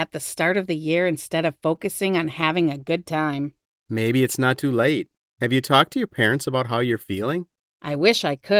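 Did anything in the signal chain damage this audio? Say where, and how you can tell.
Yes. The damage is in the network path, at the receiver's jitter buffer. At 1.75 to 1.80 s there is a short stall from a late packet. The sound holds for 18 ms, then resumes where it left off. Nothing is lost, but playout delay grows by 18 ms.

Between 2.41 and 3.35 s there are scattered short gaps, roughly seven brief ticks and smears. Each is a lost or late packet patched by extending the preceding sound. The longest is about 20 ms, and together they cover around 70 ms of that stretch.

From 3.16 to 4.22 s there is a jitter buffer slow-down. The audio drags to 93% speed with unchanged pitch and sounds drawn out. The receiver repeated pitch periods and pause fragments, adding 79 ms to rebuild its reserve.

At 6.28 to 6.62 s there is a jitter buffer speed-up. The sound runs at 109% speed while the pitch stays put, which gives it a hurried feel. 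Short pitch-period chunks, roughly 40 ms in total, were cut to shed excess buffered delay.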